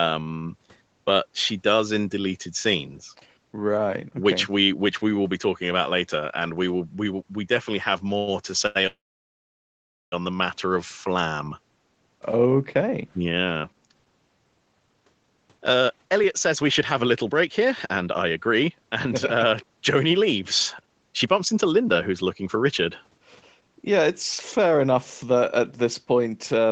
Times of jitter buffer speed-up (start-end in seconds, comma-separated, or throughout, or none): 14.44-26.65